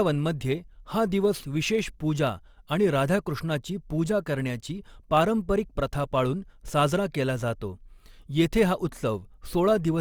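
From start to finish the speech carries a steady 100 Hz buzz from a block size mismatch (truncated). One stage writes blocks slightly longer than the next stage reads, so the tail of each block is discarded, which fits blocks of about 10 ms. So little is dropped that the pace stays at 1.0x, with normal pitch. On a waveform, jumps recur every 10 ms. A spectrogram shows vertical striations at that spacing and horizontal lines at multiples of 100 Hz.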